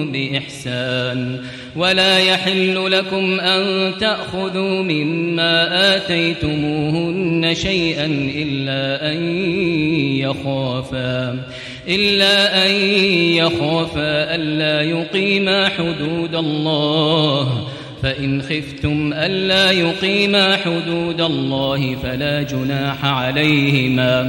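From 21.61 s to the end, a 59.94 Hz buzz with hash and a 15.7 kHz whine sits well below the sound: video or display buzz from a screen or video cable.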